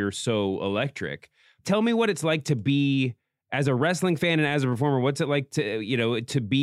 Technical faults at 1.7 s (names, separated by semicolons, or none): clock slip clicks